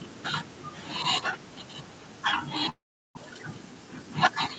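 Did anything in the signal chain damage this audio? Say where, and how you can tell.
Yes. At the network stage, a long network dropout likely cut the packet stream from 2.69 to 3.19 s. The receiver stretched the last sound into a fading buzz, then left about 370 ms of near-silence. When the speech returns, about 400 ms of it is gone.

In the jitter buffer, a speed-up from 3.74 to 4.11 s trimmed repeated pitch-period slices, roughly 50 ms in total, to drain the backlog after the gap. The speech runs at 112% speed with its pitch unchanged, so it sounds briefly rushed.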